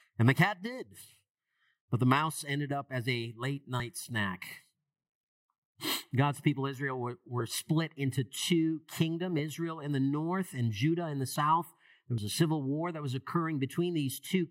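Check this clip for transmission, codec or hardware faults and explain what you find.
There are three short skips in the sound, at 3.8 s, 11.36 s and 12.18 s, each a point where the audio jumps ahead. The likely cause is a dropped buffer (overrun): samples were overwritten before being read, losing roughly 20 ms, about 70 ms, then roughly 20 ms. Unlike a dropout, no gap of silence appears, only a spliced jump.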